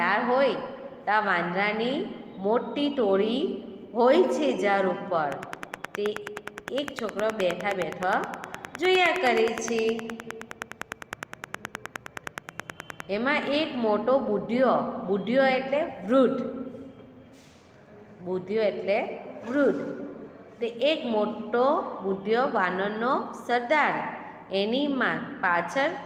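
From 5.32 s to 13.01 s there's a train of clicks, a steady tick about 9.6 times a second, roughly seventy in all, sitting around 15 dB above the sound. The even spacing and near-identical shape likely point to interference from nearby equipment.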